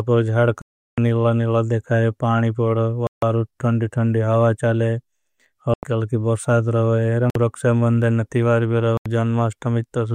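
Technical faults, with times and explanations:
0.62 to 9.06 s, Bluetooth stall: the speech drops to dead silence five times, at 0.62 to 0.98 s (0.36 s), 3.07 to 3.23 s (0.15 s, ending just before "थंदी थंदी हावा"), 5.74 to 5.83 s (90 ms, just before "बुर्साद रवे"), 7.30 to 7.35 s (50 ms) and 8.97 to 9.06 s (80 ms, right after "रक्स्या मंदन नतिवार भी"). Each time the sound halts abruptly and then resumes. This is likely interference delaying wireless packets until the headphones' buffer emptied, so playback paused until the resent audio arrived.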